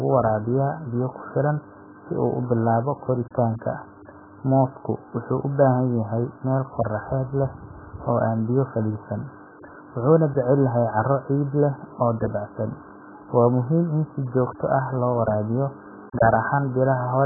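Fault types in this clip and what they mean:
AAC compression: a very low-bitrate AAC-LC encode likely stripped everything above 1.8 kHz, leaving the speech dull and muffled throughout, with heavy smeared, warbling artefacts.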